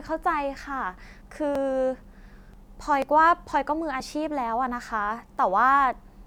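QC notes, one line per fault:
0.08–4.0 s, periodic USB or driver dropouts: about ten tiny gaps, one every 0.49 s, where something's stalling the driver and around 10 ms of speech just gets skipped. Each jump comes across as a regular tick, and it stops after 4.0 s.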